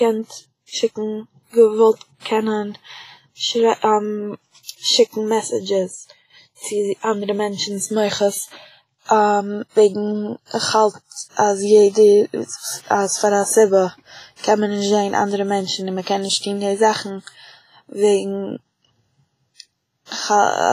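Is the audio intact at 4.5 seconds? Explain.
No. At 4.5 s, as throughout, the speech has a ringing, washy hiss that breathes with the voice, and nothing remains above 15.3 kHz. This is likely heavy WMA compression at a bitrate near 24 kbps, where long transform blocks smear quantisation noise over tens of milliseconds. Unlike a plain low-pass filter, that noise rises and falls with the signal.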